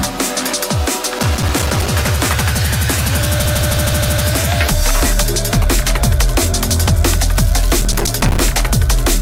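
From 1.19 to 1.87 s there is a burst of processor overload crackle: the processor fell behind and missed a run of short buffer deadlines, each leaving a brief hole of silence with hard edges. The result is a gritty, irregular tearing over the sound. The gaps are tiny, which fits buffers of about 5 ms, and the burst points to something like fifteen of them. Nothing audible is repeated, which is what separates it from a stutter.

From 3.45 to 4.23 s come repeated frames. One block of about 157 ms plays five extra times in a row, so the same fragment recurs at a steady, even rate. The repeats add about 0.78 s to the audio. Unlike crackle, the same recognisable piece comes back each time.

From 7.82 to 8.41 s the processor overload crackle returns, denser this time. The gritty dropouts are packed more tightly, which points to roughly thirty missed buffers. It stops cleanly once the load passes.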